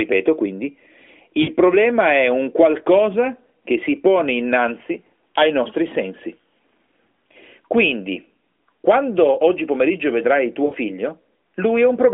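At 1.42 to 1.51 s, just before "problema è un qualcosa", and again at 10.66 to 10.75 s, right after "quando oggi pomeriggio vedrai", the speech smears and sags for about 60 ms, which fits three consecutive lost AMR speech frames. The decoder bridged each gap by repeating its last good pitch and vocal-tract settings at falling gain, so the sound stretches and fades, then resumes weakly over the 3.4 kHz narrowband line.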